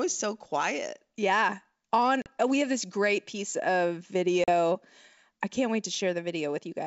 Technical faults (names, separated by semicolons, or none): packet loss on an ADPCM call